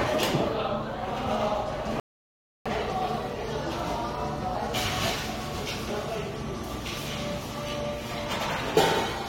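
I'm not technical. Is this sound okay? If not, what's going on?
No. At 2.00 s the sound cuts to silence for about two-thirds of a second, then picks up at 2.66 s exactly where it stopped. That's a rebuffering stall: the player ran out of downloaded audio and waited for more. Nothing's missing; it just adds a pause.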